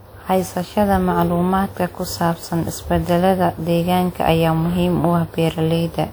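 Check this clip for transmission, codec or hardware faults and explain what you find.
The speech carries one codec fault, present throughout the clip. Generation loss runs from start to finish: the sound is swirly, hollow and smeared, with blurred consonant attacks, more damage than a single encode at a bitrate near 128 kbit/s would cause. It likely comes from around ten successive lossy WMA-style encodes, each requantising on a shifted frame grid so the noise piles up, even though content reaches almost 20.1 kHz.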